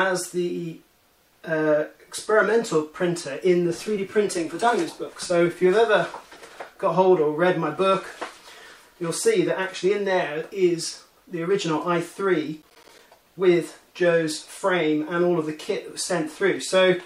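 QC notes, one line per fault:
12.62–12.99 s, processor overload crackle. For just under 0.4 s a gritty, tearing crackle rides on the sound and then stops. The processor could not finish its small audio buffers in time. Several deadlines were missed in a row, and each miss left a short hole of silence with hard edges. The gaps are spaced in a way that fits buffers of roughly 10 ms. About seven of them strung together make the burst of crackle.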